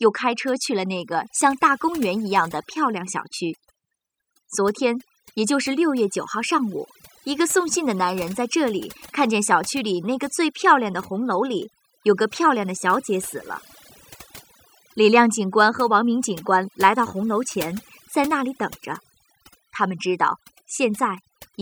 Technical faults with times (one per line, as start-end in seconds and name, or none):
0.00-21.61 overdone noise removal